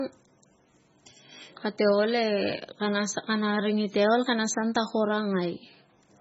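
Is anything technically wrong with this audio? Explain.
Yes. The speech carries heavy MP3 compression artefacts for its full length. Nothing is audible above about 7.7 kHz, so the sibilants sound dull and clipped. The sound has a watery, swirling quality. Weak frequency components drop in and out from one frame to the next. The encoder likely ran very short of bits, at a rate around 16 kbps. It chopped the treble at a fixed point and discarded quieter detail. Consonant attacks come out smeared.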